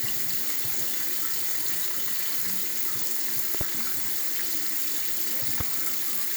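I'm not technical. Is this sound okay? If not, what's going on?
No. There is a loud pop at 3.55 to 3.63 s, heard as two quick pops in a row, and another single pop at 5.60 to 5.63 s. Both jump out well above the rest of the sound, which carries on underneath. Each is likely a sudden electrical jolt from a plug being moved, a switch, a static spark or a glitch in the playback equipment, which the audio circuits turned into a sharp click or thump.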